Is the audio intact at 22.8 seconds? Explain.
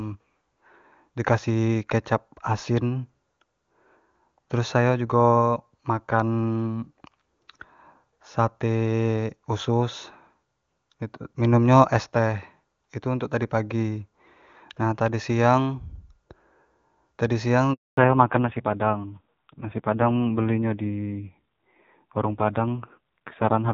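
No. From about 17.97 s to the end there's a fallback to narrowband: the call has dropped out of wideband into an older narrowband codec, so nothing above 4 kHz survives. It sounds dull and rough, like a low-rate narrowband mode.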